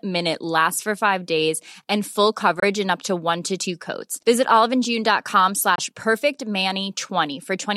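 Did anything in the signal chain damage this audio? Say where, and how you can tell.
Yes. From 0.14 s to the end there's a faint, regular ticking under the speech, about every 0.07 s, so roughly a hundred ticks. These are most likely clock slip clicks at the converter stage: two free-running clocks drifting apart by a few hundred ppm, dropping or repeating one sample each time.

There are also two short holes where the audio cuts out: 2.60 to 2.64 s and 5.75 to 5.79 s, each about 21.3 ms long. The speech picks up as if it had kept playing through the gap. That points to a likely Bluetooth dropout on the wireless playback link, consistent with a single packet arriving too late each time.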